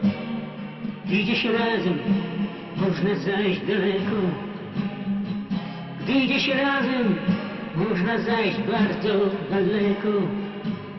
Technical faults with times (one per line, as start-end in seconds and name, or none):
none